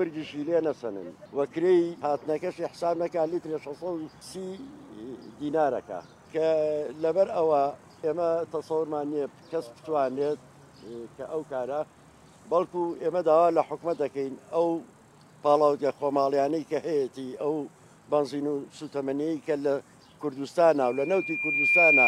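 From 20.83 s until the end at 22.08 s, loudspeaker feedback squeal takes over. The microphone re-amplifies its own loudspeaker, so a single 2.4 kHz tone swells over roughly a second to around 10 dB above the sound. An interfering whistle would start steady instead.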